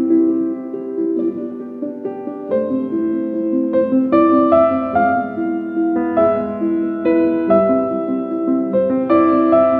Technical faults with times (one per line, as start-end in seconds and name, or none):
none